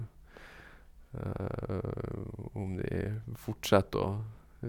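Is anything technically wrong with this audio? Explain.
No, nothing in this speech recording stood out as a technical problem on listening.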